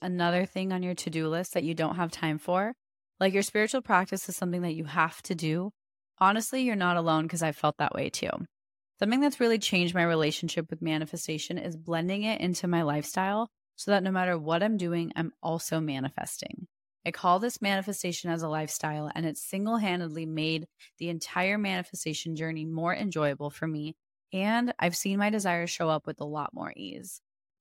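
No technical faults can be heard anywhere in the speech recording, with the signal holding steady from its opening moment to its close.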